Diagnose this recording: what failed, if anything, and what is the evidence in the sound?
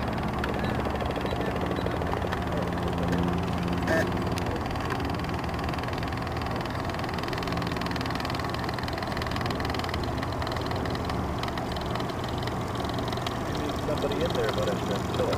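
Imaging from sample-and-hold upsampling throughout, at rate conversion: metallic fizz about 24 dB down spans 12 to 24 kHz, fitting unfiltered sample repetition from 24 kHz.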